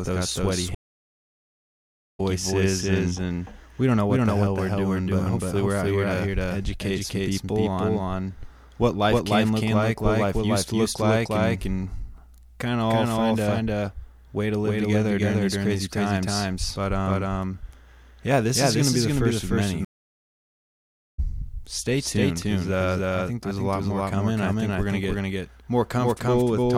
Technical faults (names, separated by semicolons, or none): doubled audio track; stream reconnect